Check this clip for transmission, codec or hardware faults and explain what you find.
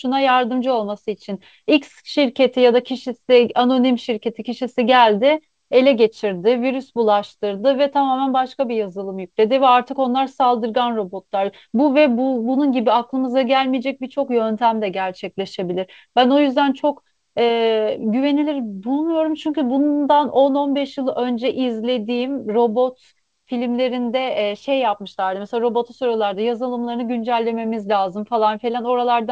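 No transmission, codec or hardware faults are audible here.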